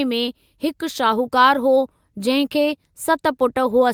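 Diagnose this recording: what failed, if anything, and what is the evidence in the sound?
Nothing in the recording points to a failure at any stage between capture and playback. The speech gives no audible evidence of a fault, so there is no mechanism to diagnose.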